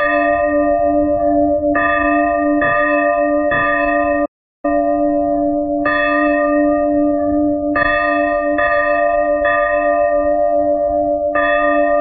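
At 4.25 s the audio stops abruptly and stays silent until 4.65 s, a gap of 382 ms, before carrying on. This is a playback stall, most likely the player running short of buffered data or its output thread being held up, so nothing reached the output until it recovered. Unlike a brief dropout or click, the silence is clean and long enough to register as a pause in the flow rather than a momentary glitch.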